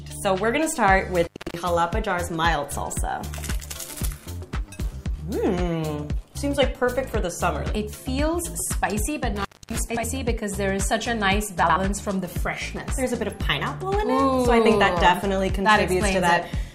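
Intermittent contact at 1.23–1.58 s and again at 9.36–9.79 s: a loose connection opens for about 0.27 s and 0.26 s, dropping the sound with crackle at each edge.

Frames out of order at 9.90–10.04 s and 11.63–11.76 s: two adjacent 64 ms blocks play swapped, which fits two frames each, giving a brief garbled flutter and no lost time.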